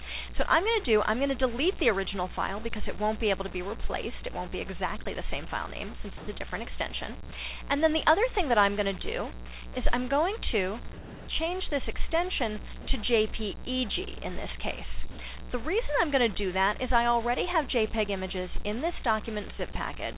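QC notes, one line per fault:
Throughout: low bit depth without dither. A grainy, signal-following distortion about 20 dB below the sound, which fits likely 6-bit rounding. The waveform shows visible steps, and the spectrogram shows a broadband noise floor that rises and falls with level.
3.88–3.91 s: short concealed packet loss. About 20 ms of audio went missing, and the gap was filled by extending the preceding sound, heard as a brief smear. The spectrogram shows a short, smoothed patch.
6.17–6.27, 7.29–7.31, 10.93–11.27, 12.81–12.87, 15.11–15.17 s: sound dropped by the voice detector. Steady comfort noise, likely inserted after the detector cut transmission, replaces 20–340 ms of sound, with up to 260 ms lost. The waveform shows flat, featureless noise blocks, and the spectrogram shows uniform haze below the 4 kHz band limit.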